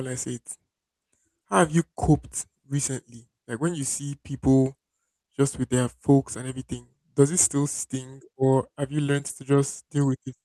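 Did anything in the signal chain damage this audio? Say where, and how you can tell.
Yes, at the network stage: there's a short concealed packet loss at 9.27 to 9.31 s, right after "or have you learned". About 20 ms never arrived in time, so the decoder papered over it by extending the preceding sound, which you hear as a quick smear before it blends back.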